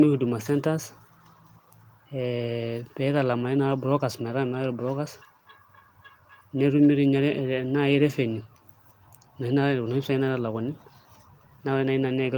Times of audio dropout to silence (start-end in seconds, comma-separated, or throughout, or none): none